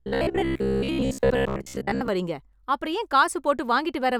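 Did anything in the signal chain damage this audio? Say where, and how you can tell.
Yes: robotic sound from repeated short buffers at 0.02 to 2.08 s, a rigid 66.8 Hz buzz, likely a starved driver buffer looping 15 ms chunks.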